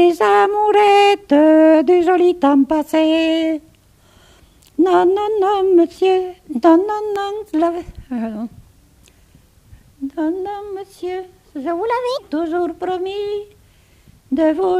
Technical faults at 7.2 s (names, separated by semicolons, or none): loud pop